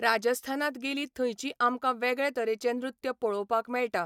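At 2.35 s the speech jumps, a tiny skip where roughly 10 ms of sound seems to vanish and the waveform lurches straight into what follows. This is an overlap between stream segments: the timestamps of two adjoining segments claimed the same stretch of time, so the player trimmed the overlap away, even though that audio had not actually been duplicated. The discarded slice leaves a discontinuity, an abrupt splice in the waveform.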